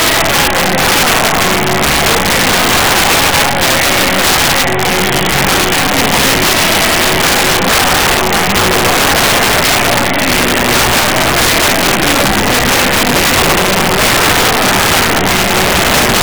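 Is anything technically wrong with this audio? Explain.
Yes. Integer overflow runs through the whole clip. The level is pushed about 7 dB past the integer limit, and nothing limits it, so every peak that crosses the maximum wraps around to the opposite extreme of the range. Roughly one sample in fourteen overshoots, and each one lands as a harsh crack on the loud moments. Clipping would flatten those peaks into a dull buzz. Here the waveform jumps full-scale to the other sign, which is far more violent and spiky.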